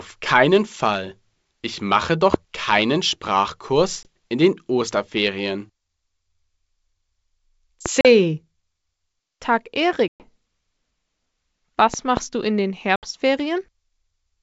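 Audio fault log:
2.34–2.36 s, 7.86–7.88 s and 11.94–12.19 s, loud pop: single sharp pops after "mache doch" and at 7.86 s, then a double pop, peaking about 15 to 20 dB above the speech. The speech continues unbroken beneath them, so this is likely a voltage pulse such as a plug, switch or static, not a dropout.
4.03–4.07 s, 8.01–8.06 s, 10.08–10.30 s and 12.96–13.07 s, packet loss on an ADPCM call: hard-edged silent gaps of 20, 40, 120 and 70 ms. The first falls just before "in den", and the last comes just after "du in den". The longest gap spans about ten packets. Unlike a pop, the speech itself vanishes, then returns slightly distorted while the decoder's predictor and step size resynchronise.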